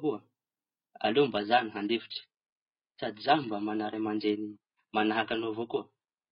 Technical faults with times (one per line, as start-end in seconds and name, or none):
1.00-6.32 adaptive stream at a lower bitrate